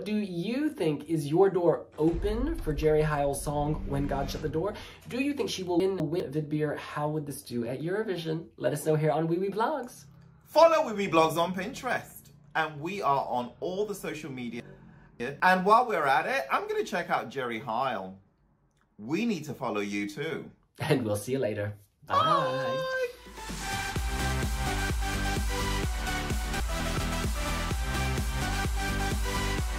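Blocks of audio were delivered or written late and played after the material meant to follow them, so the stream has chunks out of order at 5.8 to 6.2 s, 14.6 to 15.4 s and 26.6 to 27.0 s. The swapped spans fit 200 ms blocks, with the middle one displaced by about three blocks and the others by one. Nothing is missing, but each spot sounds jumbled.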